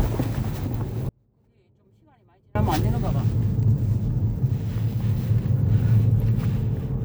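At 1.09 s the sound cuts out abruptly and stays away until 2.55 s, a gap of about 1.46 s. What remains is a faint trace of the same audio, about 35 dB below its normal level, before the full signal snaps back in mid-flow. This is an audio dropout to a faint residue. The wanted signal was most likely lost while the path after the break stayed live, so only that quiet leak came through.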